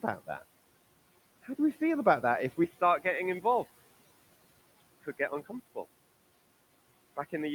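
From 2.64 s, right after "about that if we", the speech turns dull and boxy, a few decibels quieter, and a faint new background noise, with no gap at the change. The likely cause is the input switched to a poorer device. A simple bandwidth cut would not also shift the level and noise character.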